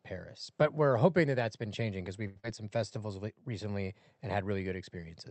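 A short stall from a late packet occurs at 2.27 to 2.38 s: a packet missed its playout time, the jitter buffer emptied, and the receiver held the preceding sound for about 82 ms until the data arrived, then resumed without losing anything, adding that much delay. A short concealed packet loss follows at 2.40 to 2.45 s, where about 80 ms of audio never arrived in time; the decoder extended the last sound for 39 ms and blended back in, leaving a brief smear and trimming the delay by roughly 40 ms. A jitter buffer slow-down runs from 2.70 to 2.99 s: to rebuild its reserve, the receiver repeated short pitch periods, stretching the passage by 47 ms so it plays at 87% speed with unchanged pitch and a drawn-out quality. Throughout, the audio passes through an Opus call path at a bitrate of 48 kbps whose top end stops at 8 kHz.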